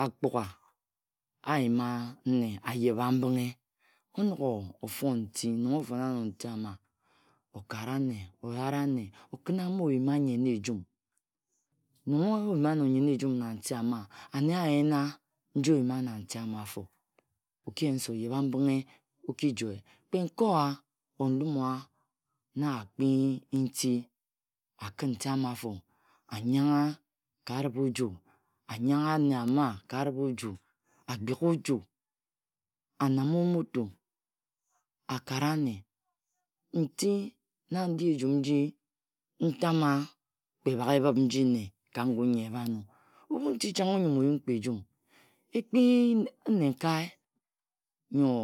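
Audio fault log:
Nothing to log here: the speech runs along with no faults to note anywhere in it.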